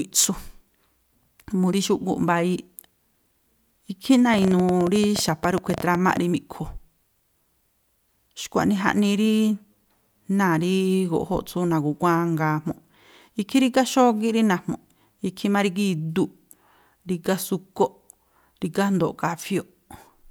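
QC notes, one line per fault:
4.34–6.18 s, train of clicks: a burst of roughly twenty similar ticks at about 12.6 per second, unevenly spaced and poking well above the speech, around 10 dB over it. Likely interference from nearby gear or a struggling interface pulsing into the line.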